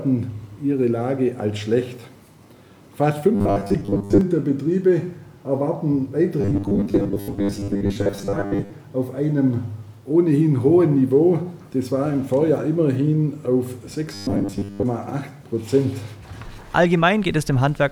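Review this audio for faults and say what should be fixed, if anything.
Robotic sound from repeated short buffers appears at 3.35 to 4.21 s, 6.41 to 8.72 s, and 14.14 to 14.83 s. The audio turns into a rigid, metallic buzz at 100 Hz. That pitch points to a repeated chunk of about 10 ms. Most of the material in these spans is lost and replaced by repeats. The likely cause is a starved audio buffer that loops its last block. Enlarging the playback buffer and ensuring steady data delivery would prevent it.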